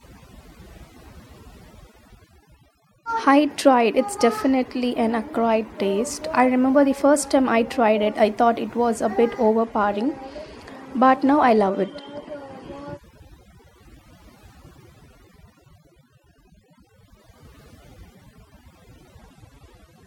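A speech recording with two problems. Overdone noise removal runs through the whole clip. The noise reduction was set too hard, so narrow frequency bands near the noise floor get pushed down or switched off. Quiet parts of the voice vanish with them. The background drops and breaks up into twinkling specks. This sits under everything else. A Bluetooth SBC bit pool drop appears twice, from 9.59 to 13.04 s and from 19.17 s to the end. In both spans the treble goes dull and a gritty grain rises. This fits the phone lowering the SBC bit pool from 31 to 16, about 110 kbps, on a congested link. With fewer bits, the top sub-bands are starved and the rest are coarsely quantised. The first span recovers once the rate returns.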